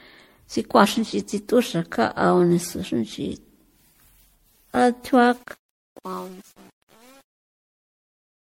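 Throughout the speech, the signal has likely been through repeated lossy MP3 passes, around seven generations at what sounds like 64 kbit/s. That generation loss stacks quantisation noise on shifting frame grids, leaving nothing above 16.5 kHz and a swirly, hollow, smeared sound with blurred attacks.

From 5.23 s to the end at 8.42 s, the fade-out that begins around 5 s shows truncation distortion: the gain stage keeps too few bits, consistent with 8-bit steps, and adds no dither. From 5.4 s on, the tail turns gritty.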